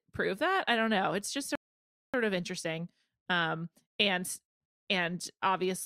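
A speech recording with a rebuffering stall from 1.55 to 2.14 s. The audio drops to silence for about 0.58 s, then picks up again at "of interesting" exactly where it left off, with no content skipped or repeated. That pattern points to the player draining its buffer of downloaded audio and pausing until more data arrived. Nothing is lost, but the gap adds just under 0.6 s to the running time and breaks the flow of the speech.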